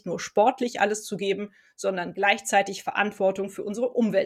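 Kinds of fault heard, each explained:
No faults can be heard anywhere in this audio.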